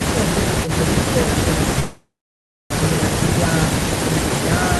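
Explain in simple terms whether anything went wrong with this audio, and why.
At 1.79 s the speech breaks off in a long network dropout, likely from audio packets arriving late or not at all. The last sound smears into a fading buzz, then about 0.64 s of silence, and speech resumes at 2.74 s with roughly 0.76 s missing.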